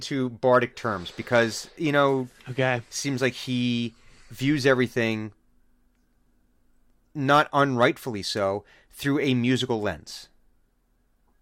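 Nothing goes wrong anywhere in this bit of speech, so there are no technical faults to walk through here.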